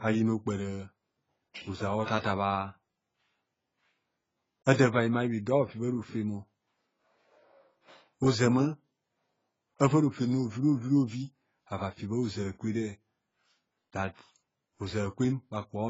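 Throughout, the speech is dull and smeared, empty above 7.7 kHz, with fizzy, warbling sibilants. This is likely heavy AAC compression, consistent with AAC-LC at about 16 kbps.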